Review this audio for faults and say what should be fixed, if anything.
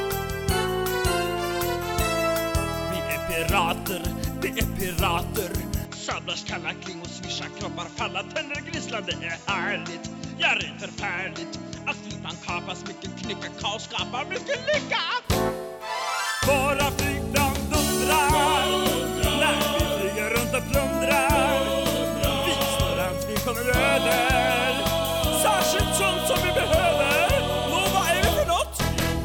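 Input switched to a poorer device, from 5.85 s to 15.25 s. The sound abruptly turns duller and drops roughly 5 dB in level, with nothing above 7.6 kHz and a faint new noise floor around 40 dB below the signal, then clears again at 15.25 s with no gap at either change. The likely cause is that recording jumped to a narrower-band microphone or headset profile and back. Lock the input to one chosen device for the whole session.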